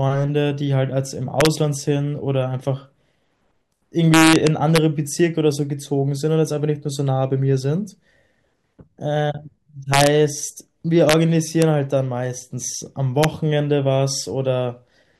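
Integer overflow cracks hit the speech at 1.41–1.46, 4.14–4.78, 9.94–10.07, 11.09–11.13, 11.62 and 13.23 s, where peaks exceed full scale by about 0–2 dB and wrap to opposite polarity instead of limiting.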